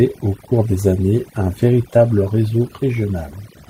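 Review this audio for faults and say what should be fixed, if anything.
Overdone noise removal runs throughout: the noise reduction was set so aggressively that frequency bands near its noise estimate get pulled down or switched off, taking quiet parts of the speech with them. The background drops and breaks up into twinkling specks. To prevent it, back off the reduction amount and work from a cleaner noise profile so only the true noise floor is attenuated.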